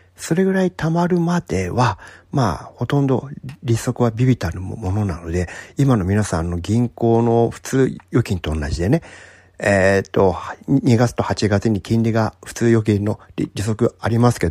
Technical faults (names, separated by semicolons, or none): corrupt frame decoded